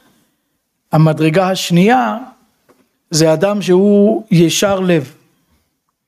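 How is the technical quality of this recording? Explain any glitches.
The recording suffers from one fault that runs through the whole clip. Gain pumping, throughout: the input gain was likely set far too high, so a fast limiter clamps each loud sound. The gain swings by around 15 dB, squashing the dynamics.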